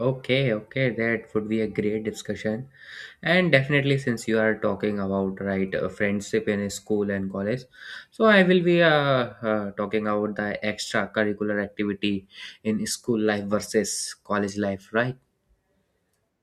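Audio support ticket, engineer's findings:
No faults found on the speech recording; nothing audible points to a problem anywhere in the chain, so there's nothing to chase here.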